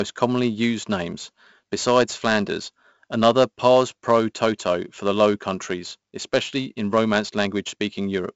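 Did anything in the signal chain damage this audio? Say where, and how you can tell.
Yes. At the codec stage, 4-bit ADPCM compression adds a gritty hiss that rises and falls with the speech level throughout, with heavy damage overall and distortion on sharp onsets. Nothing reaches above 7.7 kHz, which fits a 64 kbps stream at a low sample rate.

At the converter or driver clock boundary, faint regular ticks run from 0.15 s to 8.25 s, roughly every 0.15 s, some seventy in all. These are clock slip clicks, likely single-sample slips from two unsynchronised clocks differing by roughly 200 ppm.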